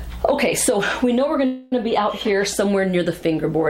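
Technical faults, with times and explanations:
1.45 to 1.73 s, call audio freeze: the last sound stretches into a fading buzz for 264 ms, likely delayed packets emptying the jitter buffer; playback then resumes without loss.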